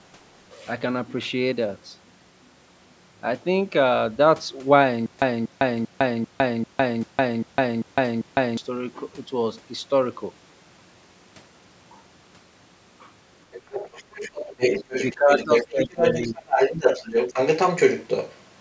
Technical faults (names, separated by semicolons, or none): stutter with silent gaps; other side's voice leaking through; speech suppressed in double talk